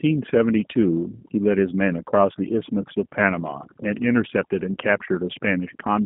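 Right from the start and all the way through, there's overdone noise removal. The reduction was pushed so hard that bands near its noise estimate get switched off, leaving near-silent gaps with twinkly specks. On top of that, the whole speech clip carries plainly audible G.729 codec damage. The sound sits in a telephone band from 150 Hz to 3.6 kHz with nothing above 3.8 kHz, and the rough, synthetic edge fits an 8 kbit/s G.729A stream.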